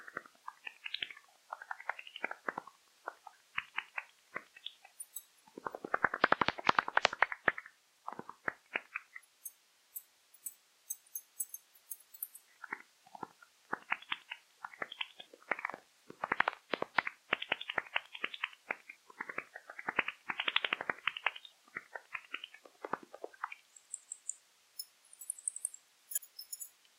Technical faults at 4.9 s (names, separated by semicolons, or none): periodic USB or driver dropouts